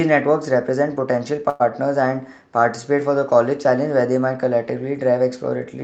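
At 1.49 s the audio stalls, and normal sound returns at 1.71 s. This is a call audio freeze. The last sound is drawn out into a short buzzing tail for about 105 ms, and nothing is cut from the speech. It picks up where it stopped, now running slightly late. The likely cause is packets held up in transit, leaving the jitter buffer empty until they arrived. The Opus call path caps the audio at about 8 kHz.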